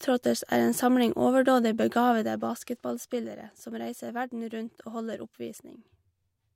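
Zipper noise runs from 1.96 to 3.33 s in this speech, just after "samling overdådig": the level falls about 10 dB in unsmoothed 1 dB steps, roughly ten per second, each clicking audibly.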